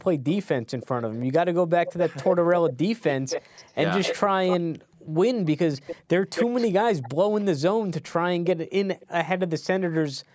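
From 0.28 to 1.26 s, a faint copy of the speech trails it by 316 ms, about 20 dB down. From 1.86 to 7.45 s, a much stronger copy returns 255 ms late, barely quieter than the speech itself. At 9.0 s, a very faint scrap arrives 293 ms behind. This echo leak is likely a loudspeaker on the far end whose echo canceller let residue through. On a spectrogram, each syllable's harmonic pattern reappears shifted right by the delay.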